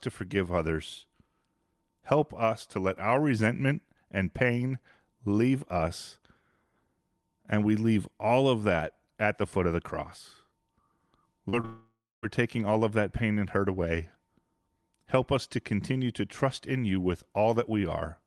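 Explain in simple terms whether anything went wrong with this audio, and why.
Twice, at 11.49 to 11.55 s and 11.61 to 11.65 s, the speech briefly smears or wobbles. This is short concealed packet loss: tiny bits of audio arrived late and were patched over.

From 11.65 to 12.25 s, the sound fades into a buzz or hiss and then a quarter second of silence. This is likely a long network dropout that lost about 0.58 s of speech.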